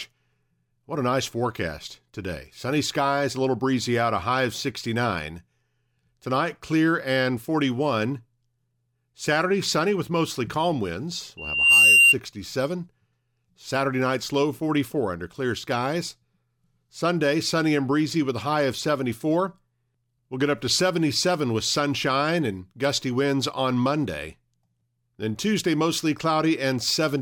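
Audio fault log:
11.37–12.15 s, loudspeaker feedback squeal: just after "with mostly calm winds", a single tone at 2.8 kHz swells over just under half a second into a piercing squeal, peaking about 10 dB above the speech. The microphone is picking up its own loudspeaker, and at 2.8 kHz the loop gain exceeds one, so that frequency keeps feeding itself. A spectrogram shows one narrow horizontal line brightening across the range, and the waveform envelope balloons.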